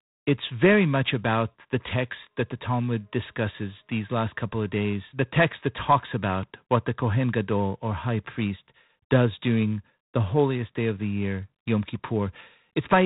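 From start to finish the speech carries G.726 ADPCM damage, and it is plainly audible. The codec sends only a few bits per sample describing the error of an adaptive predictor, so quantisation noise rides on the signal and rises and falls with its level. Here that noise is a harsh, rasping hiss under every syllable, which fits the 24 kbit/s mode. The band also stops at 4 kHz, leaving the audio narrow and dull.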